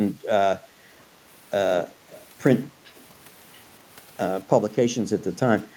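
At 1.87 to 1.92 s a faint, delayed copy of the speech slips in about 226 ms behind the original, very low at roughly 30 dB down. From 2.10 to 2.25 s a slightly stronger fragment returns at the same lag, around 25 dB below the speech. These are echo leak scraps, likely from a far end on loudspeaker whose echo canceller let some of its microphone pickup through and sent it back.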